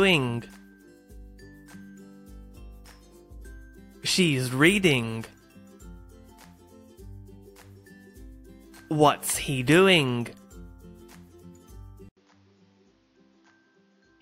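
Input switched to a poorer device, likely, at 12.09 s: after an 80 ms silence the sound turns duller and quieter, by roughly 10 dB, with nothing above 6.9 kHz and a new noise floor roughly 40 dB down, as a narrower-band microphone takes over through 14.22 s.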